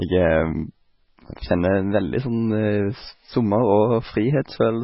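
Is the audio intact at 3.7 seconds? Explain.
No, 3.7 s falls inside damage that runs through the whole clip, most likely MP3 compression. Nothing comes through above 5.6 kHz, so the speech sounds dull and boxed-in, and the weak frequency detail the encoder threw away keeps flickering in and out from frame to frame. That gives a watery, swirly texture with chirpy sibilants and softened attacks. The damage is heavy enough to point to a very low bitrate, something around 16 kbps.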